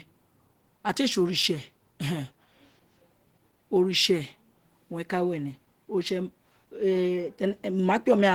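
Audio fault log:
throughout: Opus compression. The speech sounds plainly hoarse, rough and grainy, with noisy fill in the upper bands even though content still reaches about 20.2 kHz. This likely comes from Opus running in its hybrid speech mode, which fits a bitrate near 16 kbps.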